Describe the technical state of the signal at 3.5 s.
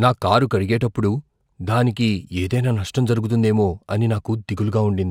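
At 3.5 s, as throughout, there's imaging from linear upsampling: straight-line interpolation from 24 kHz to 44.1 kHz dulls the top and leaves faint images at 12–24 kHz, roughly 40 dB down, so sibilants get a slight metallic shimmer.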